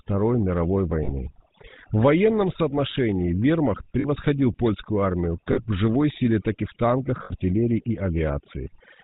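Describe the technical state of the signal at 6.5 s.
At 6.5 s the speech carries overdone noise removal, present throughout the clip. A noise reduction stage was pushed too hard. It pulls individual frequency bands far down whenever they sit close to its noise estimate, and the softer parts of the voice get caught with them. The background collapses toward silence with small twinkling specks.

The same moment also shows the GSM full-rate codec, again throughout. This codec models the vocal tract and excites it with evenly spaced pulses, keeping only one excitation sample in three. Nothing above 4 kHz survives, so the top end is cut away. The damage is plainly audible here as a buzzy, gravelly roughness, which fits the 13 kbps full-rate mode.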